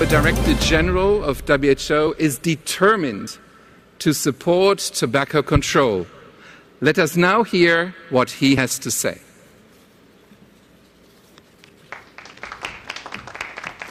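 Compressed frames skipped at 2.07, 3.27 and 8.57 s: the audio jumps ahead by about 50, 70 and 50 ms, which fits two or three dropped 26.1 ms frames.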